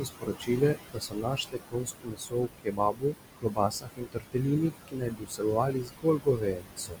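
The background sinks and swells around the speech for the whole clip. These are noise suppressor artifacts: the suppressor pulls down, frame by frame, every band it judges to be steady noise, by about 20 dB here. The room noise it works on sits only about 9 dB below the speech.

Parts of the speech itself also come out swallowed, in three stretches: 0.0 to 3.16 s, 3.38 to 4.47 s, and 4.7 to 7.0 s. Quiet sounds and word endings fade, adding up to roughly two seconds, under a second, and about a second and a half respectively. This is speech cut by the noise suppressor. It mistook those low-level passages for noise and turned them down with the background, by about 20, 21 and 22 dB at worst.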